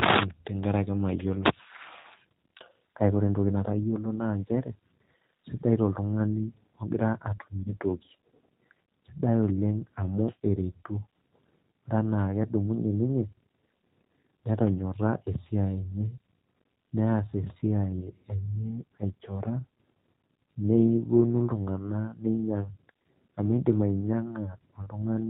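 Throughout, the speech passes through a G.729 codec, and its harshness points to about 8 kbit/s: nothing above 4 kHz survives, leaving it plainly rough and synthetic. At 2.01 to 2.06 s and again at 7.63 to 7.73 s, a VoIP packet was lost and concealed by the speech codec. Each 30 ms gap, consistent with one missing packet, is stretched into a buzzy tone or coloured noise that fades, with the voice staying weak briefly afterwards.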